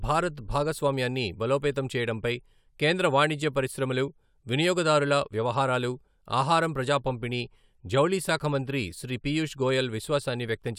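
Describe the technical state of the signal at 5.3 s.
At 5.3 s the speech signal is intact, with no audible technical fault at that moment.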